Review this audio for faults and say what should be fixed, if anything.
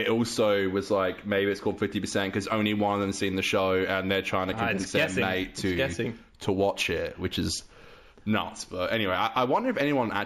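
Imaging from linear upsampling runs through the whole clip. The top end sounds dulled, and a faint metallic shimmer sits in the 8 to 16 kHz band. That shimmer is a mirrored copy of the content roughly 25 dB down, which fits material raised from a 16 kHz rate by straight-line interpolation between samples. To prevent it, resample with a proper windowed-sinc or polyphase filter rather than linear interpolation.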